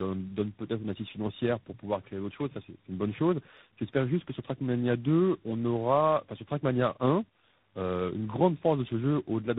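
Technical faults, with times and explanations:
Throughout, tandem speech coding: the speech passes through three separate speech coders in turn, which fits a chain running from AMR-NB through CVSD to G.726 at 24 kbit/s. Each coder re-encodes the previous one's errors, so roughness, muffling and warble stack up beyond what any single codec would produce. Nothing is heard above 3.9 kHz. A single low-bitrate codec would give one layer of artefacts, whereas here the damage is compounded and layered.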